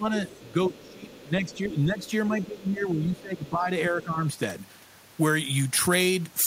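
Speech suppressed in double talk, 0.0 to 4.22 s: the talker's level dips by up to around 15 dB across about three seconds in total, likely because the echo canceller mistook simultaneous talk for echo and attenuated both. Other side's voice leaking through at 0.31 to 1.65, 2.02 to 2.11, 2.76 to 2.84 and 3.18 to 3.49 s: a faint second voice, roughly 25 to 30 dB below the talker, likely residual loudspeaker echo the canceller missed. Pre-emphasis left on, 4.59 to 6.46 s: treble sits about 13 dB high at 10 kHz relative to 1 kHz, which fits an uncorrected 75 µs FM boost, so the sound turns thin, bright and sibilant.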